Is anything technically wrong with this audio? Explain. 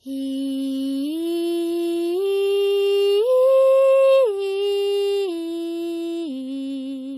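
Yes. Throughout the music there is a washy, ringing smear with a hiss that swells and fades with the signal, and nothing above 15 kHz. This is likely heavy WMA compression at a very low bitrate: long transform blocks spread quantisation noise over tens of milliseconds, and faint spectral detail is discarded.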